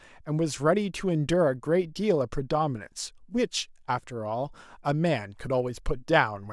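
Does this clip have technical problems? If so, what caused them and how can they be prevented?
No, there are no technical problems in this recording.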